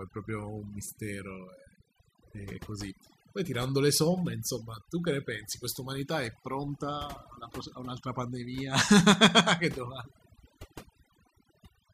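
Speech with overdone noise removal throughout: the background drops and breaks up into twinkling specks.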